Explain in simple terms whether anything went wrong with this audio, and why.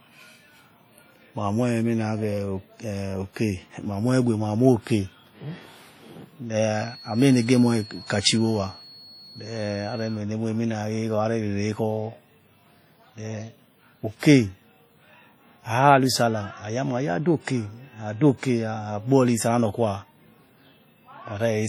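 Yes, two things went wrong. Throughout the speech there is heavy WMA compression damage. It sounds ringing and washy, with a hiss that rises and falls with the talking. This likely comes from saving the file in a small, heavily squeezed form.

From 6.71 to 10.23 seconds a feedback whistle sits behind the speech. It is a thin, steady tone near 4.3 kHz, well below the speech in level. It likely comes from a loudspeaker feeding back into the microphone, right on the edge of howling.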